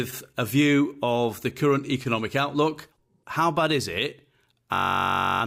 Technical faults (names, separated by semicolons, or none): system hang loop